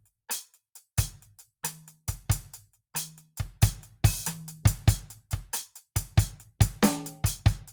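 No technical faults can be heard at any point in the music.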